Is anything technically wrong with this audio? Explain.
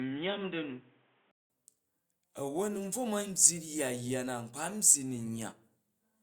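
Yes. From 0.0 to 1.5 s the speech is dull and boxy. It runs about 5 dB quieter over its own faint noise floor, then a 0.19 s silence precedes full-band sound. The likely cause is an input switched to a poorer device. A plain low-pass filter would not shift level, noise and tone together.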